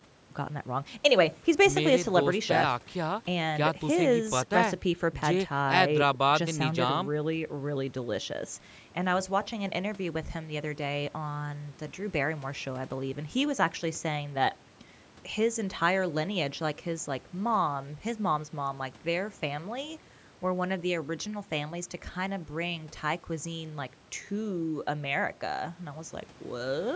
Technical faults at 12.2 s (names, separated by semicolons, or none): none